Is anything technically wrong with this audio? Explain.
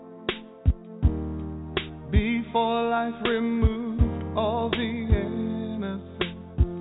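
No, nothing here stands out as a technical fault: the audio has come over a call path and holds together steadily, with no content above 4 kHz, which fits a narrowband telephone codec such as G.711 A-law at 64 kbps.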